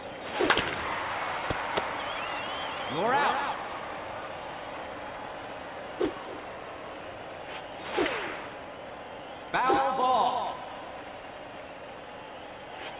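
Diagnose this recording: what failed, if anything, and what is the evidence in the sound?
Nothing in the signal chain shows a failure: no dropouts, clipping, discontinuities, pitch or timing shifts, or other technical faults can be heard anywhere in the recording.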